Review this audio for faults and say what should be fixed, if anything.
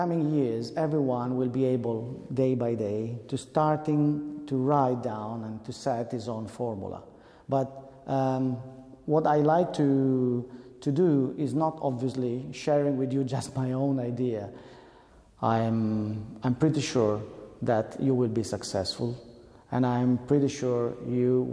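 Nothing in the audio needs fixing. No fault can be heard at any point, so no repair or preventive step is called for.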